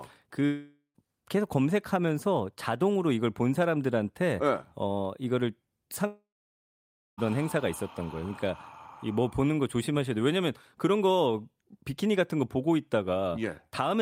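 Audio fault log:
0.45–0.97 s, long network dropout: about 0.5 s of sound is missing, likely from lost packets. A fading buzz smears across the spectrogram before roughly 0.1 s of flat, empty waveform.
6.07–7.20 s, long network dropout: about 1.1 s is lost, likely from lost packets. A brief decaying hiss gives way to nearly 0.94 s of blank spectrogram and a flat waveform line.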